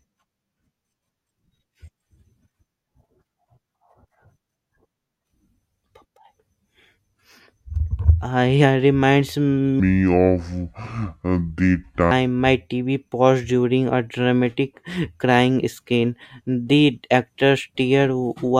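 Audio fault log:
9.80 to 12.11 s, section at the wrong speed. The speech suddenly drops into a slow, deep drawl. It plays at about 0.68 times its proper rate, so every second of sound stretches out. Pitch falls with the speed, by about seven semitones. Voices sound heavy and sluggish rather than just lowered. At 12.11 s the normal rate snaps back. The likely cause is a player or edit running this stretch against the wrong clock.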